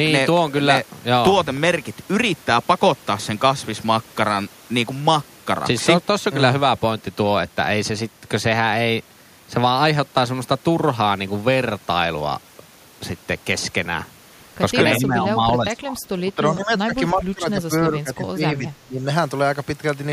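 From 0.07 to 1.87 s, periodic USB or driver dropouts tick every 0.1 s. Each gap is a fraction of a millisecond of silence, suggesting a blocked bus or driver.

From 14.99 to 19.07 s, the speech dips by up to about 15 dB for roughly three seconds in total. This is likely speech suppressed in double talk by an echo canceller.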